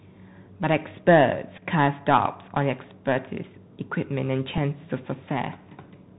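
Throughout the speech, the link runs the Bluetooth CVSD headset codec, coding each sample as a single up-or-down bit at 64 kbps with an adapting step, so nothing above 4 kHz survives. Loud bright sounds outrun the step size and distort, s sounds come out scratchy, and a fine granular hiss sits under the voice. The damage is plainly audible the whole way through.

From 1.57 to 1.62 s, a Bluetooth headset packet is repeated. Audio was lost between headset and phone, and the chip decoded the previous packet's bits again to cover the gap. About 7.5 ms went missing, which fits two lost packets, and the repeated chunk gives a brief buzzy roughness at that point. At 4.58 s a single repeat covers a gap of about 3.8 ms, heard only as a small tick.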